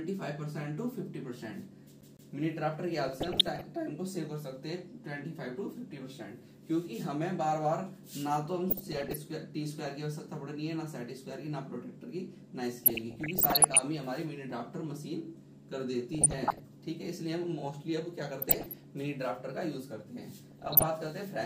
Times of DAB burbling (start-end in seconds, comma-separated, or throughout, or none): 3.04-3.64, 8.70-9.16, 12.84-13.79, 16.13-16.60, 18.38-18.84, 20.44-20.86